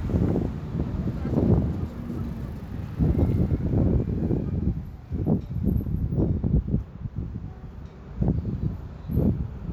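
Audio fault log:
No audible faults found.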